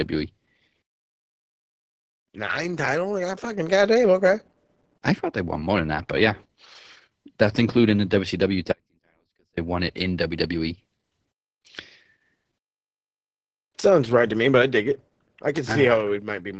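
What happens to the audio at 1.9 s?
At 1.9 s the speech carries heavy Opus voice compression, present across the whole clip. The SILK linear-prediction coder limits the band to about 8 kHz and codes the excitation coarsely, which fits a rate near 10 kbps. The speech sounds muffled, hoarse and slightly robotic.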